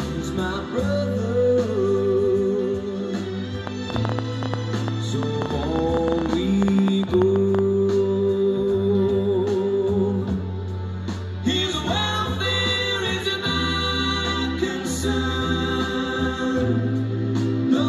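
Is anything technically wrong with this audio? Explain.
Yes. From 3.67 s to 7.60 s there is a train of clicks: around forty sharp, near-identical pulses at about 8.9 per second, spaced unevenly, peaking roughly 15 dB above the surrounding sound. The likely cause is an external source injecting short impulses into the signal path, such as interference from nearby equipment or a faulty connection or power supply. It is heard as an irregular ticking or popping that sits on top of the audio and stays audible in quieter gaps.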